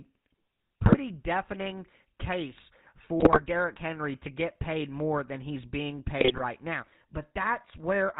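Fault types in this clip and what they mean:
GSM full-rate codec, throughout: the speech is rebuilt from a vocal-tract model driven by sparse, evenly spaced pulses, with nothing passed above 4 kHz. This produces a plainly audible buzzy, gravelly roughness, which fits the 13 kbps full-rate coder.
GSM bit errors, at 0.82–0.97 s before "deafening case", 3.2–3.42 s after "deafening case", and 6.18–6.43 s after "more than he's being": corrupted bits reached the decoder and spoiled its filter, pitch and gain values, so the speech breaks into squawks, pops and gargling.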